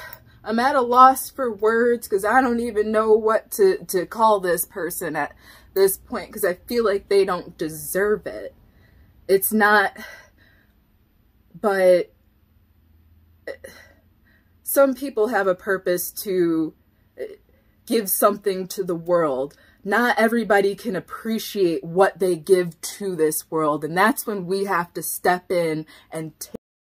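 A cut-off end arrives at 26.56 s, where the sound stops abruptly in mid-event rather than fading or decaying naturally. The final stretch of audio was never delivered to the output, so the waveform is simply truncated and the remaining 0.31 s to the end of the file is flat digital silence. There is no release, reverb tail or gradual fall in level, just an instant drop from active sound to nothing.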